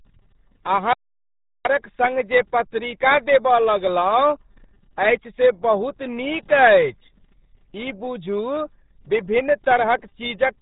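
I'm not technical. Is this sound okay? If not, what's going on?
No. Throughout, the speech sounds muffled and gargly, with nothing above 3.8 kHz, typical of the RealAudio 14.4 codec, an old dial-up format that squeezes audio very hard.

From 0.93 to 1.65 s there's an audio dropout to silence: dead quiet, not even background noise, until "सङ्ग जे पत्रिका". The input was likely briefly lost.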